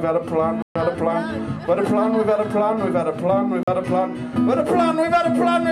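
Bluetooth dropouts occur from 0.62 to 0.76 s and from 3.63 to 3.68 s, leaving silent gaps of about 130 ms and 44 ms. The sound cuts out and returns further along, as if it had kept playing through the gap. The likely cause is wireless packets arriving too late at the headphones and being discarded, and the lengths fit a short run of lost packets in each case, the first run being about three times longer.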